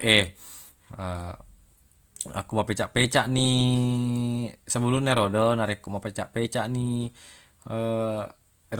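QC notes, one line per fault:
Throughout, Opus compression: the speech has a rough, grainy texture, and the damage is plainly audible rather than subtle. Sustained tones and vowels sound noisy and rough rather than swirly. This is likely a low-bitrate Opus encode at about 24 kbps in its music mode. When the bits run short, that mode patches the thin bands with folded copies of lower bands or with noise. The bandwidth still reaches about 20 kHz, so it doesn't sound muffled, just coarse.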